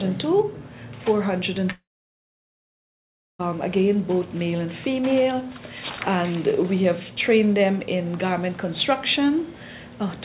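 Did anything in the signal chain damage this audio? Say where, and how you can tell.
Yes. At 1.72 s the audio becomes a fading buzz, then about 1.6 s of silence until 3.41 s, and returns with that stretch lost. This is likely a long network dropout, concealed by the receiver. A waveform shows a decaying tail, then a flat line.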